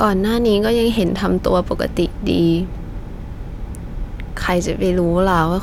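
No technical faults can be heard in this recording.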